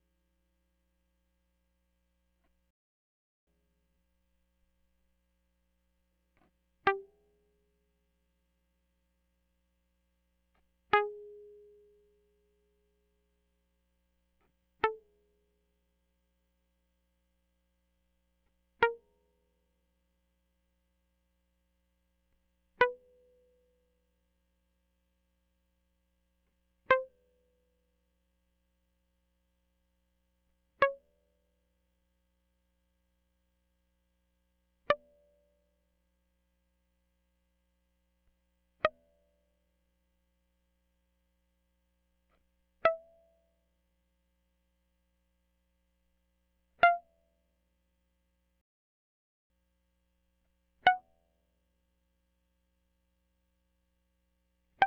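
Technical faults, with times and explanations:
2.71–3.47 s and 48.61–49.50 s, playback stall: the music cuts out abruptly in mid-flow and the output drops to silence for about 0.76 s the first time and about 0.89 s the second, then resumes. Silence like this, with no fade, fits the player likely running out of buffered data or having its audio thread blocked, so nothing reaches the output until it recovers.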